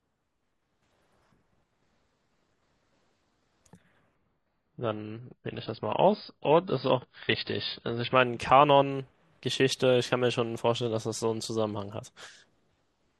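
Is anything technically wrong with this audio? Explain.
Yes. From 4.15 to 8.15 s the speech drops to an adaptive stream at a lower bitrate. The player fell back to a much cheaper encoding for about 4 s when the connection slowed, and the sound thins abruptly, with nothing above 5.1 kHz and more codec artefacts. That fits a switch from roughly 96 to 16 kbit/s AAC. On a spectrogram the upper band is sharply sliced off for that span, and the waveform shows no gap at either switch.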